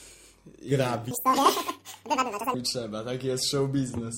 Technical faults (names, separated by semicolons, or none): section at the wrong speed